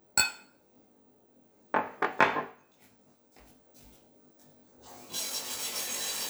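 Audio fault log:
Throughout: channel delay (comb filtering). One side arrives roughly 20 ms behind the other, and when the two fold down to mono, whatever they share cancels at evenly spaced frequencies. The first notch sits somewhere around 30 Hz, with more following roughly every 50 Hz up the spectrum. With a delay that long, the whole thing sounds rough and slightly doubled.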